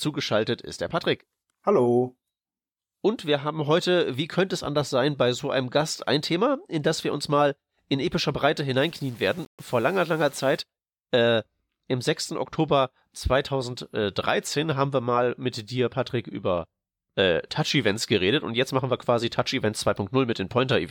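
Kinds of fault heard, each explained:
Low bit depth without dither: from about 8.81 to 10.62 s the speech turns grainy and rough, with a distortion that rises and falls with the sound itself rather than sitting underneath as a steady hiss. Quiet stretches crackle or sputter instead of fading smoothly, and the error sits only about 30 dB below the signal, which points to roughly 7-bit resolution. This is likely plain rounding with no dither, which is why it sounds grittier than broadband noise.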